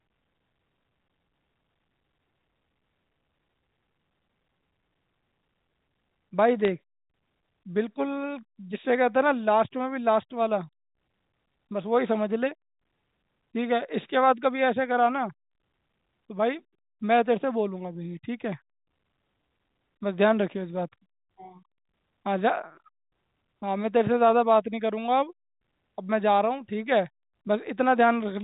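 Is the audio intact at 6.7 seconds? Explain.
No, there's a brief burst of bit errors on a digital phone line from 6.65 to 6.68 s. Around one bit in a thousand gets flipped on the G.711 line, and each flip corrupts a single sample, so flips that hit a high bit or the sign of a loud sample give sharp ticks riding over the speech.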